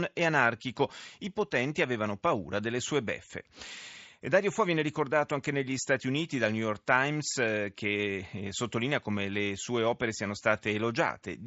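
Nothing here counts as a fault: the speech comes over a Bluetooth mSBC headset link working as it should, with the usual wideband ceiling leaving nothing above about 7.7 kHz and only the light graininess that codec brings to louder moments.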